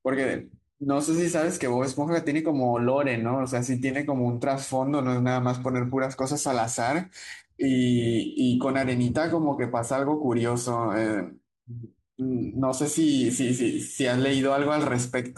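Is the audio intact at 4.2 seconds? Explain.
Yes, the speech at 4.2 seconds is intact, with no fault heard at that moment.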